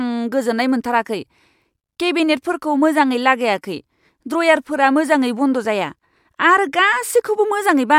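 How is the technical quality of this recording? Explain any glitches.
Nothing in this speech recording stands out as a glitch, so there's honestly nothing here that needs explaining.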